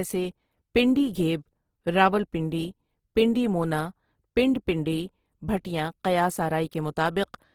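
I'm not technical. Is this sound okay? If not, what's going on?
No. The speech was likely squeezed hard by Opus compression, which saves space by rebuilding parts of the sound from borrowed or invented noise instead of keeping every detail. From start to finish, this makes the voice sound plainly rough, grainy and noisy.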